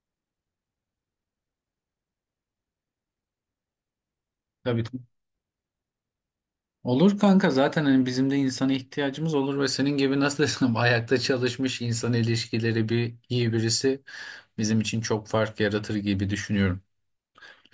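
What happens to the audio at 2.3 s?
Nothing goes wrong at 2.3 s; the audio is intact at that moment.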